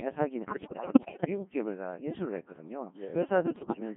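From start to end, the speech passes through a Codec 2 vocoder, heavily damaged and band-limited to 150 Hz–3.5 kHz. It is rebuilt from sine waves, so it sounds robotic and buzzy, consistent with about 1.6 kbit/s.

From 0.45 to 1.27 s, and again from 3.56 to 3.80 s, bit errors on digital voice radio hit. Roughly a fifth of the bits flip, so pitch and level jump into warbling gibberish.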